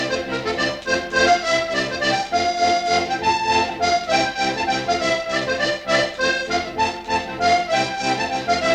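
Throughout, periodic clock jitter at around 1 kHz shakes the converter's timing, adding sidebands that give the sound a rough, metallic edge, strongest on higher content.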